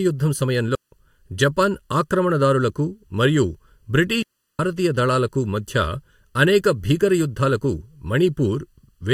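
Right from the start the whole speech clip has a hollow, phasey colour. That's channel delay comb filtering: one channel runs a little under a millisecond late, and summing to mono cancels evenly spaced frequencies, starting somewhere around 700 Hz.

Then there are two digital wireless dropouts, from 0.75 to 0.91 s and from 4.22 to 4.59 s. Each time the link lost too much data and the receiver muted, leaving clean holes of near silence, roughly 160 ms and 370 ms long, with no noise burst on either side.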